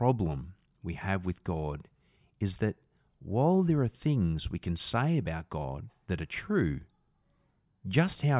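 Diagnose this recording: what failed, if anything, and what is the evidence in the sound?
Nothing failed here: I can't hear any fault in the chain anywhere along this bit of speech, so there's nothing to trace back to a stage.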